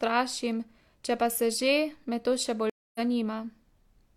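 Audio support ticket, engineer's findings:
Speech cuts out at 2.70 s, about 0.25 s of silence, resumes near 3.00 s slightly ahead, roughly 0.15 s of speech skipped, softened onset. Stream reconnect: connection dropped, player rejoined live stream, fresh decoder started mid-stream with first frame fading in.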